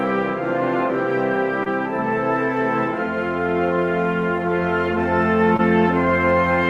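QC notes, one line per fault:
1.63 to 1.68 s, short concealed packet loss: about 20 ms of the music never arrived in time, so the decoder patched the gap by extending the last bit of sound for about 24 ms before easing back into the real signal. You hear it as a quick smear or slight wobble in the music.
5.57 to 5.61 s, short concealed packet loss: the same thing again, with a 20 ms hole filled by 20 ms of continued sound and a blend back, giving another brief smudge.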